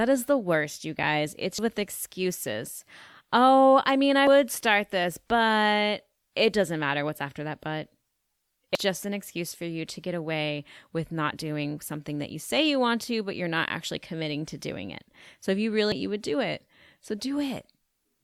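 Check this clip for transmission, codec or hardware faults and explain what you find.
The clip, which is speech, has one fault type: damaged data in a compressed stream, occurring four times, each lasting about 32 ms, at 1.58–1.62 s, 4.27–4.30 s, 8.75–8.78 s and 15.92–15.95 s. At each point, corrupted bytes in the encoded stream cause the decoder to misread or reject the affected frames and lose sync until it finds the next valid frame header. Each event is a brief disturbance to the speech lasting about 32 ms.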